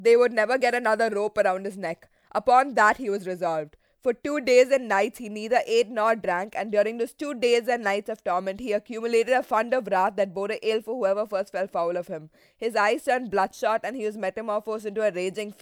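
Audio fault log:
No faults are heard in this speech recording. Nothing in the audio calls for a timed entry in this log.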